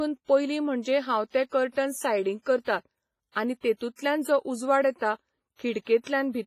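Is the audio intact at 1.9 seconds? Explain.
No. At 1.9 seconds the speech carries heavy transform-codec damage that runs through the whole clip, and its likely cause is WMA compression. The encoder splits the signal into long blocks and quantises each coarsely, so noise smears across tens of milliseconds around every syllable while weak spectral lines drop out entirely. The result is a ringing, washy sound with hiss that swells and fades with the speech. Nothing remains above 15.4 kHz, which fits a low bitrate around 24 kbps.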